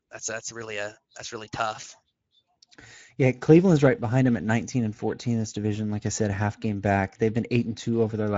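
Speech encoded throughout with the Speex codec at a middle setting, about 17 kbps, leaves plainly hoarse, noisy excitation, a noise-like upper band, and nothing above 7.7 kHz.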